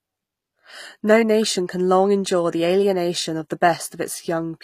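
Likely HE-AAC compression at a low bitrate around 24 kbps rebuilds the treble throughout by copying lower bands upward, leaving gritty, lispy sibilants and nothing above 15.5 kHz.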